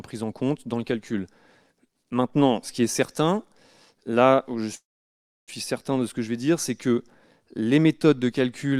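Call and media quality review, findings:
Call audio freeze, 4.75–5.50 s: last sound stretched into a short fading buzz, then 0.66 s silence; playback resumes where it stopped, nothing lost, delay up 0.72 s. Likely jitter buffer underrun from delayed packets. Waveform: brief decaying tail, then flat gap.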